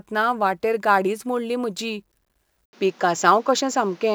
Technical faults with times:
2.65-4.14 input switched to a poorer device

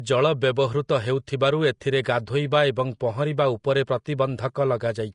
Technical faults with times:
0.00-5.14 Vorbis compression

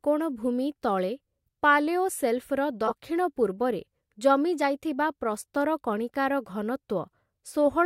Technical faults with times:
1.46-1.49 corrupt frame decoded
2.86-2.92 corrupt frame decoded

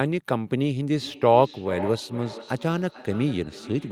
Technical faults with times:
0.99-3.91 feedback echo between two devices

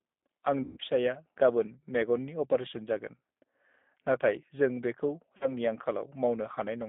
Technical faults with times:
0.00-6.88 G.729 codec
0.63-0.78 VoIP packet loss concealed by the speech codec
5.37-5.53 VoIP packet loss concealed by the speech codec

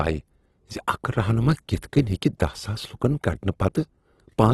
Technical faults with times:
0.00-4.54 Opus compression

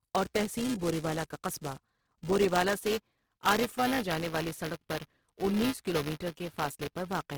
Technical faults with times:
0.00-7.38 buffer tearing
0.00-7.38 Opus compression

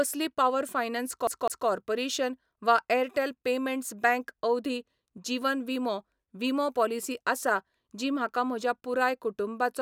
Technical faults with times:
1.27-1.68 CD stuck on one turn

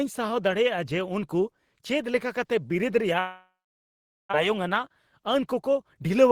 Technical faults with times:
3.19-4.35 long network dropout
4.49-5.98 jitter buffer speed-up

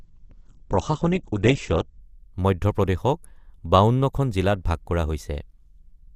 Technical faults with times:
0.00-2.00 adaptive stream starting at a low bitrate

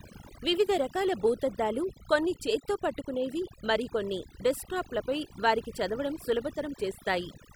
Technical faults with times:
0.00-7.55 overdone noise removal

